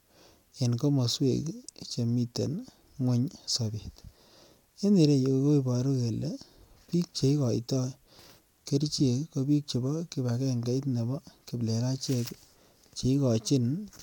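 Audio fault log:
Nothing stood out on listening to this speech clip.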